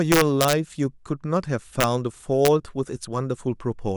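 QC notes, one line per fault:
0.12–0.53 s, integer overflow: violent cracks rip through the loud speech peaks across this stretch. The signal was pushed about 3 dB past the integer ceiling, so instead of being held at the limit each peak wrapped around to the opposite extreme, jumping across the full range.
1.81–1.84 s, integer overflow: a short, sharp crack, harsher than ordinary clipping would sound. Again about 3 dB of overdrive carried the loudest samples beyond the largest value the format holds, and they flipped sign rather than saturating.
2.45–2.48 s, integer overflow: a brief crack on a speech peak. Here the level sat right at the integer limit with essentially no overdrive, yet the sum still tipped past the ceiling on the top samples and wrapped to the opposite sign.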